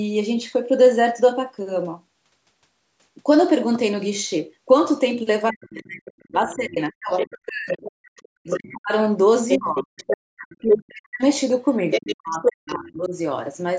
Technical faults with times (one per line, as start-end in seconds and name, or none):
5.50-7.85 speech suppressed in double talk
6.07-6.55 other side's voice leaking through
7.17-8.74 other side's voice leaking through
8.41-8.93 speech suppressed in double talk
9.49-10.78 other side's voice leaking through
9.57-11.22 speech suppressed in double talk
11.90-12.53 other side's voice leaking through
11.99-13.15 speech suppressed in double talk